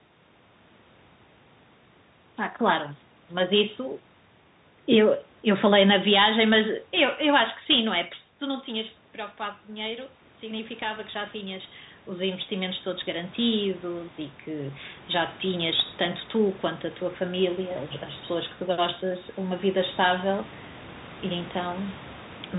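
From start to finish the speech carries the sound of a Bluetooth CVSD headset codec. Nothing above 4 kHz gets through, so the voice is boxed into a narrow telephone band. The damage is plainly audible. Loud, bright moments outrun the codec's adapting step and break up. S sounds turn scratchy. A fine granular hiss sits under the speech. All of this fits the 64 kbps one-bit stream this codec sends.

Around 8 s the voice drops by about 12 dB, as if the talker leaned away. That drop is not a system fault. From 8.4 s to 14.83 s the automatic gain control responds by rising. It lifts its gain by about 10 dB, slowly, over several seconds. Voice and room noise swell together. The background grows audibly louder as the speech level creeps back up.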